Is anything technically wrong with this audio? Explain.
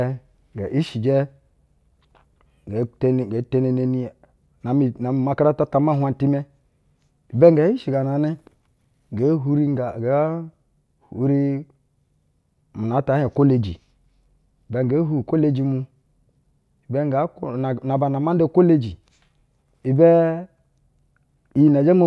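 No, the speech signal shows no technical faults at any point in the clip.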